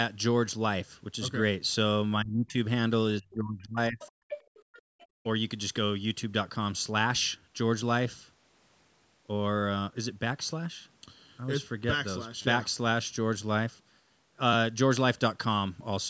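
From 2.21 to 2.57 s and again from 3.19 to 4.01 s, the talker's level falls sharply, by roughly 30 dB at its deepest, across a few hundred milliseconds each time. This is speech suppressed in double talk: the echo canceller likely heard both sides at once and attenuated the near talker along with the echo.

Overlapping the end of that dip, the other side's voice leaks through at 3.99 to 4.12 s, quietly at around 20 dB below the talker, then more plainly from 4.28 to 4.82 s at about 10 dB down, with a faint scrap at 4.99 to 5.06 s. This is likely residual loudspeaker echo the canceller failed to remove.

Between 4.63 and 5.23 s the room background is gated by the echo canceller, dropping by about 30 dB for roughly 400 ms in total while the loudspeaker plays, then returning when the suppression releases.

At 12.42 s a repeated buffer produces a brief buzzy stutter lasting about 30 ms. A short slice of audio sounds like it is played three extra times with hard joins, which fits a 10 ms buffer being replayed while new audio was late.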